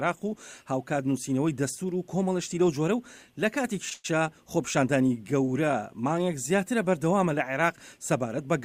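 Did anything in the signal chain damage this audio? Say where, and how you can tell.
Yes, at the network stage. A short stall from a late packet at 3.89 to 3.93 s holds the last sound for 18 ms, because the jitter buffer ran empty and the receiver stretched what it had. Nothing is lost; on a spectrogram the preceding harmonics extend, with a slight buzz or dip.

Immediately after, a call audio freeze runs from 3.93 to 4.06 s, 109 ms of continued sound that decays into a fading buzz or hiss without reaching silence. The likely cause is packets held up in transit and an emptied jitter buffer. The waveform shows repeating, shrinking cycles, then resumes in place.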